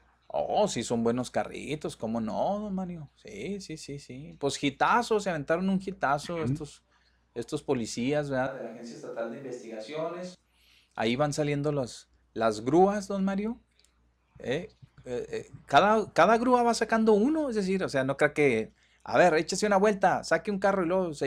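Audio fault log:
8.47 to 10.35 s, switch to a distant microphone: The speech suddenly turns roomy and hollow and loses its low end. The level drops by about 5 dB. Room noise rises to around 35 dB below the speech. Then the close sound returns just as abruptly. The close microphone's signal was likely lost, leaving only a pickup further away. At that distance, reflections from the room reach it almost as strongly as the direct sound.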